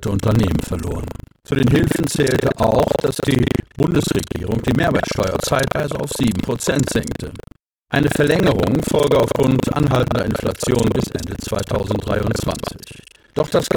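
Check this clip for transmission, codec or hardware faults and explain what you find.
There's one fault, buffer tearing, running the whole way through. Writer and reader have slipped, so about a third of each 40 ms period replays audio roughly 150 ms old, giving a robotic 25 Hz rattle whenever speech is present.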